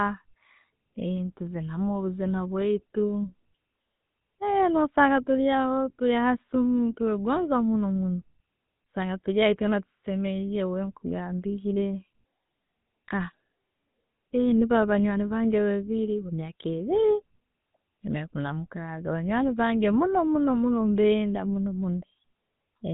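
GSM full-rate codec damage runs through the whole clip. The speech has been modelled as a vocal-tract filter fed by coarse, regularly spaced pulses, which fits a 13 kbps GSM full-rate channel, leaving a plainly audible buzzy, gravelly roughness, with nothing above 3.8 kHz.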